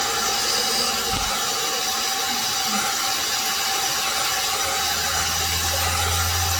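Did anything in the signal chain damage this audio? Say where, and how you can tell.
Yes, codec stage: swirly, hollow, smeared sound throughout, blurred attacks, nothing above 18.6 kHz; likely generation loss from about ten AAC re-encodes.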